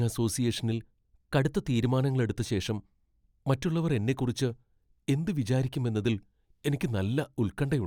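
From 0.72 s to 1.85 s the speech plays 5.9% fast and 99 cents sharp, then snaps back. This is a drift correction step, likely a clock-matching resampler abruptly changing rate to rebalance its buffer. A spectrogram shows the harmonics stepping up together, then dropping at 1.85 s.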